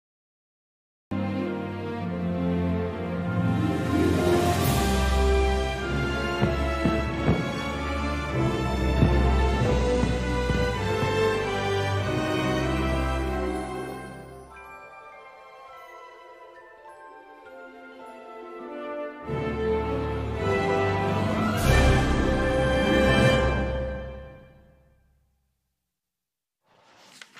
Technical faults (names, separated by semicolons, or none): cut-off start